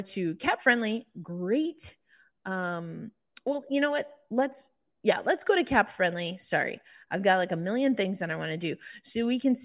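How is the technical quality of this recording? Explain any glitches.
No technical faults or glitches can be heard here.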